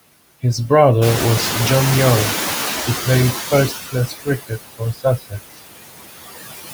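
Throughout the speech, noise suppressor artifacts are present: the suppressor pulls steady-noise bands down by about 18 dB frame by frame, so the noise sinks between the words and rises under them. At about 1.0 s the room noise jumps by about 12 dB to roughly 8 dB under the speech, and from 1.01 to 3.78 s the noise suppressor is catching up. Its noise estimate lags for 2.77 s, so the louder background passes with only about 14 dB of reduction before sinking. Speech is then cut by the noise suppressor from 3.69 to 4.59 s and again from 4.78 to 5.57 s. It mistakes quieter speech for noise and drops it by up to about 20 dB for around a third of a second in each span, leaving parts of it swallowed and faint.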